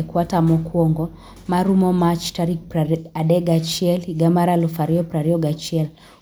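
No faults are audible anywhere in the speech recording.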